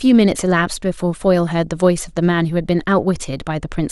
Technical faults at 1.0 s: MP2 compression; DAB burbling

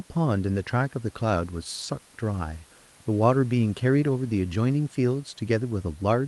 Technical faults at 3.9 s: none

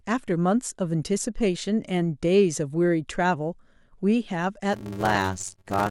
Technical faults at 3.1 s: none

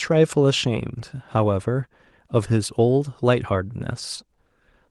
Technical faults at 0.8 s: none

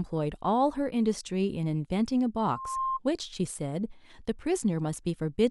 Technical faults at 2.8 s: loudspeaker feedback squeal

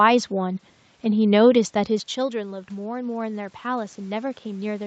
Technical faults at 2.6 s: automatic gain rising

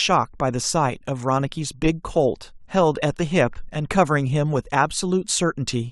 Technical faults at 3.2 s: none

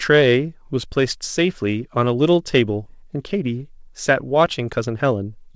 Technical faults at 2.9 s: skip ahead; jitter buffer speed-up

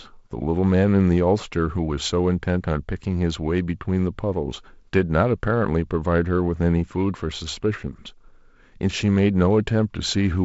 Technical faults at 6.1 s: none

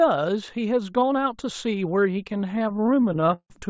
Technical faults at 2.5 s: repeated stalls (stutter)

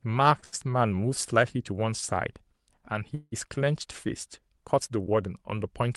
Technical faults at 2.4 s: none

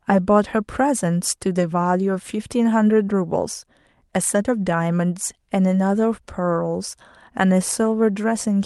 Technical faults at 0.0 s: none

